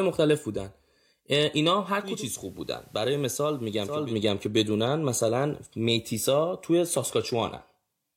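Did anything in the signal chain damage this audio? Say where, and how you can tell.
Yes. At the receiver, a case of digital radio blending to analogue: the tuner lost its digital stream at 1.91 s and cross-faded over 374 ms to the FM broadcast until 4.18 s. The speech drops by about 4 dB, with hiss rising to roughly 30 dB below it.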